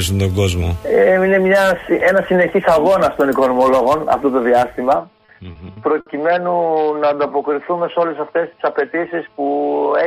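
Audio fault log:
4.96–10.06 s, input switched to a poorer device: the band abruptly narrows, the level drops by about 5 dB, and a new noise floor appears roughly 50 dB down, with no silence at the switch. This is likely a change to a narrower-band microphone or headset profile.
5.11–6.09 s, repeated stalls (stutter): six short holds, the longest 60 ms, fill 170 ms in total, about 17% of that stretch. The receiver's buffer kept running dry, so the last sound was extended each time. Nothing is lost, but the audio drags and stutters.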